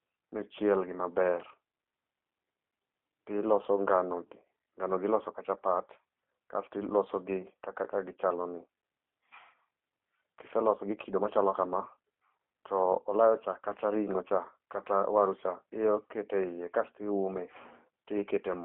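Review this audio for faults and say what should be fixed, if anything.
Throughout the speech there is G.729 codec damage: the sound is confined to a telephone band of roughly 250 Hz to 3.5 kHz and has a rough, buzzy, synthetic edge. That comes from the codec rebuilding each 10 ms frame from a vocal-tract filter, a pitch predictor and a few pulses, which fits an 8 kbit/s G.729A stream. Simple band-limiting would sound dull but clean; the frame-by-frame roughness is what marks this as codec damage. To prevent it, record or route the call through a wideband codec instead of G.729.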